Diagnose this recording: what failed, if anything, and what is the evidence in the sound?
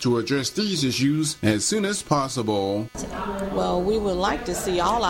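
Computer activity noise, analogue wiring: chirping near 300 Hz, roughly 30 dB under the sound throughout, tracking computer load through shared ground, unlike steady hum.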